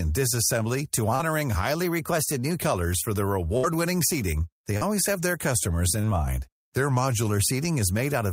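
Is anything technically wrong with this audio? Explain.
Yes. The speech has three kinds of fault.

Short concealed packet loss occurs at 1.15 to 1.21 s, 4.77 to 4.83 s and 6.01 to 6.05 s. About 40, 40 and 20 ms of audio arrived too late. The receiver extended the preceding sound, leaving a brief smear.

A burst of packet loss hits at 3.57 to 3.65 s. About 60 ms is gone. The concealment holds the last sound and fades it, then jumps ahead.

Two drift correction steps change speed and pitch together. From 1.83 to 2.62 s the audio runs about 6% fast, roughly a semitone sharp (106 cents). From 6.77 to 7.30 s it runs about 6% slow, 113 cents flat. The likely cause is clock-matching software abruptly changing the playback rate.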